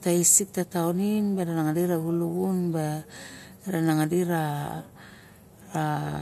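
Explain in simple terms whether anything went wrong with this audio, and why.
Listening to the recording, nothing went wrong: no part of the speech stood out as damaged or out of place at any point.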